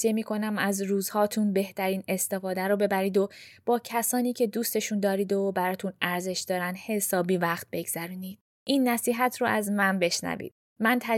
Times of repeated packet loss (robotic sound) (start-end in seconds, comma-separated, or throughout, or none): none